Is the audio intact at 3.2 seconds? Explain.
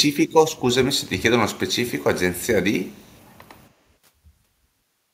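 No. From 2.84 to 3.21 s there is an echo leak, a very faint copy of the speech trailing about 286 ms behind, likely from a far-end echo canceller letting loudspeaker pickup through. On a spectrogram it shows as weak, delayed duplicate harmonic traces.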